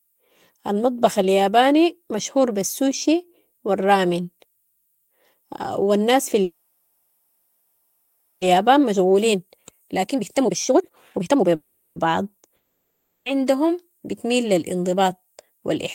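From 6.43 to 8.43 s the speech stops and the last sound is stretched into a fading buzz for about 2 s, then resumes exactly where it left off. This call audio freeze likely comes from delayed packets draining the jitter buffer. It adds roughly 2 s of delay without losing any speech.

From 8.57 to 11.55 s the speech runs hurried, at about 138% speed with the pitch unchanged. This is a jitter buffer speed-up. The receiver trims many short pitch-period slices, about a second in total, to work off the built-up delay.

A second freeze at 11.55 to 11.98 s holds and fades the sound again for 0.41 s. It inserts a gap while nothing is lost.

From 12.56 to 13.28 s a fading buzz gives way to about 0.3 s of silence. The speech then returns at "عندهم بتميل لى" with 0.7 s missing. This long network dropout is likely due to audio that never arrived.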